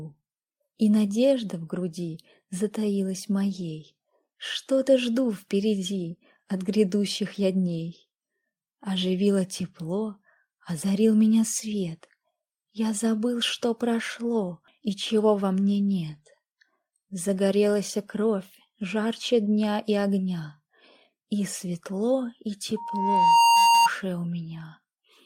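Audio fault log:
22.76–23.89 s, loudspeaker feedback squeal: a single steady tone at 932 Hz swells out of the sound over roughly the first 0.7 s, then sits as a piercing whistle about 10 dB above the programme until it stops. The microphone was hearing the loudspeaker it fed, and at 932 Hz the loop gain rose past one, so that frequency fed on itself and grew until the amplifier limited it or the loop was broken.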